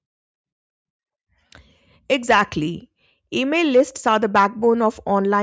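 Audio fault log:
No fault is heard in this speech clip.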